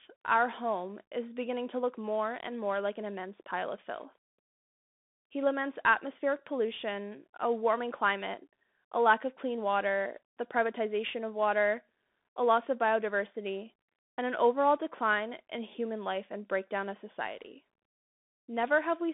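Throughout, a Bluetooth CVSD headset codec cuts everything above 3.8 kHz, and its one-bit slope tracking adds granular hiss and scratchy s sounds, unlike a clean telephone band-limit.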